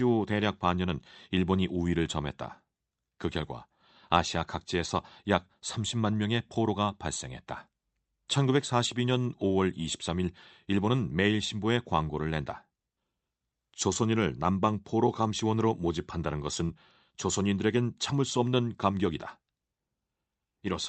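At 16.65 s, running to 16.71 s, a short concealed packet loss occurs. About 40 ms of the call audio arrived too late for the decoder, and the receiver covered roughly 35 ms of that hole by extending the preceding sound before blending back into the real signal. It is heard as a brief smear or wobble rather than silence. That continuity separates it from a plain dropout, where the sound would simply cut out. The surrounding call-path audio is band-limited to about 8 kHz.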